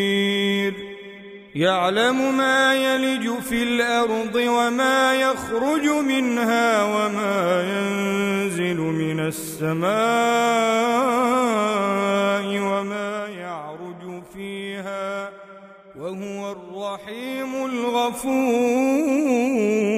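Zipper noise runs from 17.14 to 18.19 s, where a level change of roughly 10 dB happens in unsmoothed 2 dB steps, about seven per second, each one ticking.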